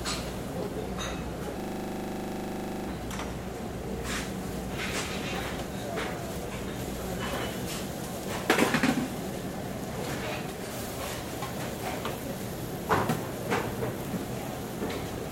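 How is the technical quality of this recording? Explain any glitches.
The recording has one clear glitch. System hang loop, 1.6 to 2.88 s: the system froze while the sound hardware kept replaying its ring buffer, so a 40 ms piece of audio repeats 32 times at 25 Hz. It sounds like a rapid, buzzy stutter.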